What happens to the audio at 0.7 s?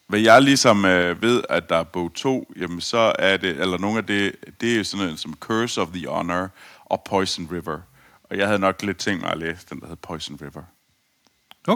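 A brief harsh, crackling edge breaks onto the loudest syllable between 0.66 and 0.71 s, about 50 ms, as the waveform peaks flatten against a ceiling. That flattening is microphone overload, likely from an input level set too high: the peaks try to climb about 3 dB past the converter's limit, so their tops are sliced off and a small fraction of samples sit clipped at the converter's limit, adding the gritty distortion heard there.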